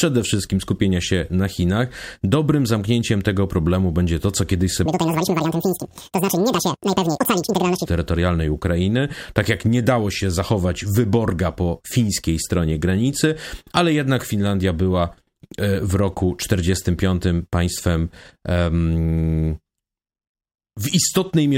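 A speech clip in which, from 4.86 to 7.86 s, just after "będzie to co kiedyś", the audio is read two samples at a time (double speed): pairs of samples are taken as single frames. The sound runs twice as fast, an octave (12 semitones) higher.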